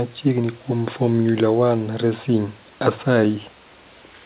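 At 0.42 to 0.45 s, a short concealed packet loss occurs. About 20 ms of audio arrived too late. The decoder patched it by extending the preceding sound, leaving a brief smear. The audio reaches nothing above 4 kHz, which fits a G.711 mu-law call codec at 64 kbps.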